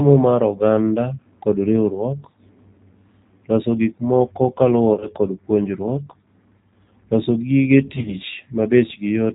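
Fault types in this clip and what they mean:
G.729 codec: The whole speech clip runs through an 8 kbit/s low-rate VoIP codec that models each 10 ms frame with a vocal tract filter, a pitch predictor and a sparse set of pulses instead of the real waveform. Here the damage is plainly audible. Nothing above 4 kHz survives, so the sound is band-limited and muffled, and the voice has a rough, slightly synthetic quality throughout.
VoIP packet loss concealed by the speech codec: Two short bursts of lost packets were bridged by the decoder, which keeps extending its last pitch and filter while lowering the gain. The first falls between "loso gik moko" and "kod puonjriuok" at about 4.94 to 5.07 s, and the second at about 7.96 to 8.15 s. Each burst drops about 60 ms of audio scattered over 80 to 100 ms, in runs of up to 30 ms. The speech turns into a brief smeared, fading sound and takes a moment to recover.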